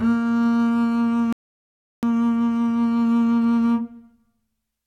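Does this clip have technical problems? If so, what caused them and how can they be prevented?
Yes. At 1.33 s a rebuffering stall drops the music to silence until 2.03 s, then playback resumes exactly where it stopped, adding 0.70 s without losing any audio; the player's buffer ran dry awaiting downloaded data. A deeper buffer or adaptive bitrate switching prevents it.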